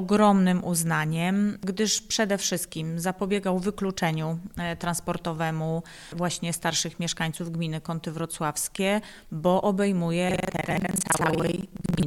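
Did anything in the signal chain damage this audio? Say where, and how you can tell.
Yes. The damage is at the driver or buffer stage: buffer tearing from 10.26 s to the end. A rattling, robotic buzz at about 21.5 Hz appears, which fits a 2048-sample ring buffer whose writer and reader have slipped. Roughly half of each period replays audio from about 150 ms earlier, with hard joins either side. Unlike an underrun, the gaps are filled with stale sound rather than silence, and the buzz stops wherever the signal does.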